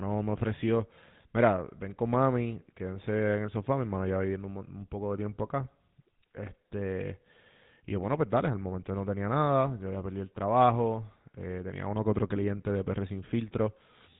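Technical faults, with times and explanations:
throughout GSM full-rate codec: nothing above 3.8 kHz and a buzzy, gravelly roughness from coarse pulse-driven excitation, unlike a clean telephone band-limit; fits 13 kbps.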